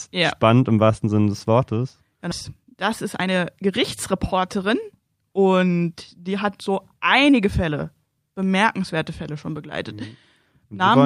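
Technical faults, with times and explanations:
2.31 to 2.33 s, skip ahead: the speech jumps forward with no gap, losing roughly a second of audio. The receiver dropped that stretch while later audio was already queued, so the two sides of the cut butt straight together and the delay shrinks by about a second.
2.57 to 2.75 s and 3.19 to 7.77 s, jitter buffer speed-up: the receiver trimmed short pitch-period slices to drain an overfull buffer. The first burst runs at about 152% speed, and the longer stretch runs at about 110%. Together they remove roughly 600 ms, so the speech sounds hurried but the pitch stays the same.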